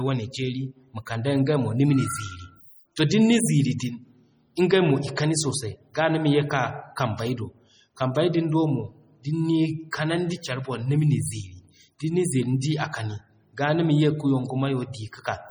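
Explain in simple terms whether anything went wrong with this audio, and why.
The speech sounds watery and swirly throughout, with smeared consonants, most likely from heavy MP3 compression discarding detail to save space. Pre-echo puts brief hiss before sharp sounds at 2.96, 5.16 and 9.91 seconds (just before "kanandi care"), because the codec spreads its noise ahead of each attack.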